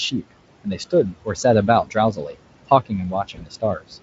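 Throughout the clip the background noise drops away between phrases and swells back under the speech. These are noise suppressor artifacts: the suppressor is pulling bands it judges to be steady noise down by about 21 dB, frame by frame, so the room noise pumps rather than sitting still.

Parts of the speech sound swallowed or faint at 0.64–0.93 s, 1.11–1.44 s, 1.84–1.96 s, 2.12–2.36 s and 3.1–3.97 s. This is speech cut by the noise suppressor, which mistook quieter stretches for noise and turned them down by about 15 to 21 dB. The last and deepest cut covers around half a second in total.

Inside that last cut, at 3.35–3.42 s, the sound is briefly stretched out and fades. This is VoIP packet loss concealed by the speech codec. About 20 ms of audio went missing, which fits a single lost frame. The decoder filled it by extending the previous pitch at falling gain, and it took a few tens of milliseconds to recover.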